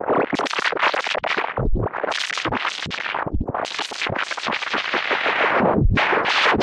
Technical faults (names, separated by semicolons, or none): none